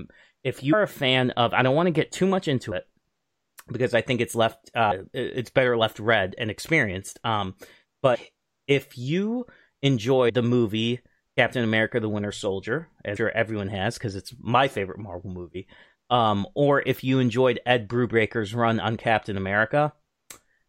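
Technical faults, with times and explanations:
0.72 s, 2.71 s, 4.90 s, 8.14–8.16 s, 10.28–10.30 s, 13.15 s: compressed frames skipped. Whole 26.1 ms frames went missing or were rejected by the decoder, so the speech jumps ahead by roughly 50 to 200 ms (about two to ten frames), as before "it's better left read". Overlapping frames smear each join into a brief blip rather than a click.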